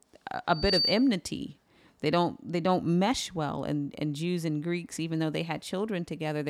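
From 0.49 to 1.14 s a loudspeaker feedback squeal rises at 4.6 kHz: the microphone re-amplifies the speaker's output until that frequency runs away, swelling over about a third of a second to sit a little above the speech. A spectrogram shows one bright horizontal line, and the waveform envelope balloons.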